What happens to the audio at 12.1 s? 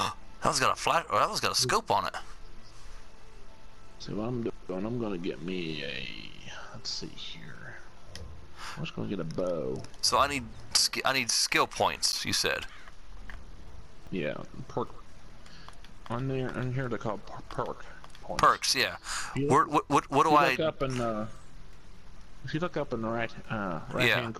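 At 12.12 s a block of samples roughly 10 ms long was replaced by zeros, producing a block of digital silence. The signal drops straight to digital silence and returns with no fade in or out, so each edge is an abrupt discontinuity in the waveform. At this length the two edges and the tiny gap between them are too close to separate by ear, and the dropout is heard as a single sharp tick.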